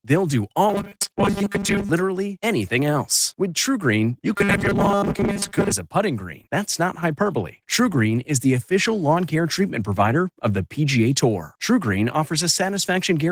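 Opus voice compression at 16 kbps runs through the whole speech clip, in hybrid mode with content reaching about 20 kHz. The damage comes from coarse excitation coding rather than band narrowing, so the speech sounds hoarse and faintly robotic.

From 0.69 to 1.91 s, ending before "anything else", and again from 4.33 to 5.72 s, ending before "a putting green", comes robotic sound from repeated short buffers. A rigid metallic buzz fixed at 200 Hz, which fits a likely 5 ms buffer being replayed, replaces most of the real audio. Unlike the codec's steady roughness, this buzz keeps one pitch and is confined to those two stretches.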